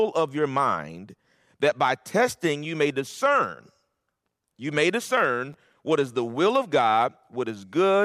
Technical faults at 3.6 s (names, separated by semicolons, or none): none